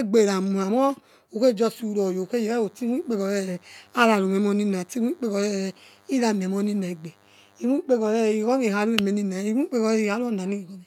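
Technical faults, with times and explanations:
2.21–7.65 s, DECT cordless phone buzz: a thin, steady 100 Hz buzz rich in harmonics sits faintly under the speech, from a nearby DECT transmitter's 10 ms radio bursts being rectified.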